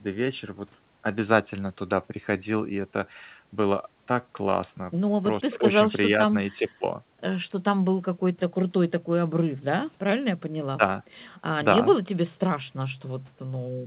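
No technical faults can be heard in this speech recording.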